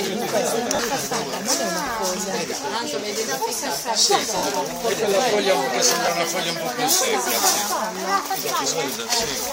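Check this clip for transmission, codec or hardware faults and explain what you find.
The clip has one kind of fault: lost LE Audio frames, in three places. They occur at 0.75 to 0.79 s, 4.37 to 4.43 s and 6.06 to 6.08 s. The gaps last about 40 ms, 60 ms and 20 ms. That fits runs of 10 ms frames. When frames go missing, the LC3 decoder repeats the last spectrum with random signs. Tonal content becomes a brief noisy smear. The longest gap begins to fade. The lossy coding leaves only light, faint traces.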